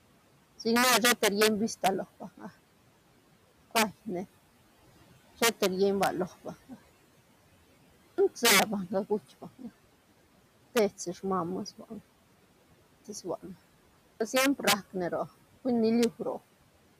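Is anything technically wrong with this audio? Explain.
Yes. The clip has three kinds of fault.

The first is integer overflow, and it runs through the whole clip. The loudest speech peaks are driven about 10 dB past the largest value the samples can hold. Those samples are not limited. They wrap around and jump to the opposite extreme of the range. Less than one percent of the samples are affected. Each time it happens, you hear a violent crack. These cracks are much harsher than ordinary clipping.

The second is speech cut by the noise suppressor. It happens three times: from 2.2 to 2.5 s, from 9.42 to 9.65 s, and from 11.79 to 11.92 s. Each time, the suppressor treats part of the speech as noise. It pulls that part down with the background. The drop is about 11 dB in the first two cuts and about 15 dB in the last. Those moments sound swallowed or faint. The room noise sits about 21 dB below the speech.

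The third is audio missing between chunks, at 10.45 s. A few tens of milliseconds of sound drop out. The two sides join with no gap. The likely cause is a recorder working in fixed blocks and losing a sliver at the boundary. The timing fits 6-second chunks. You hear a brief skip, and the speech jumps forward.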